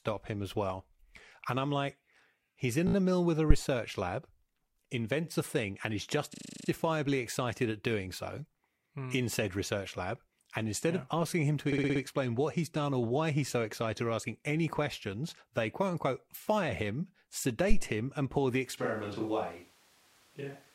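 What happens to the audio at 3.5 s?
A phantom power thump hits at 3.50 to 3.59 s, just after "a mill with a": a supply switching on the live input steps through the coupling capacitors, giving a deep thump that dies away within about 20 ms.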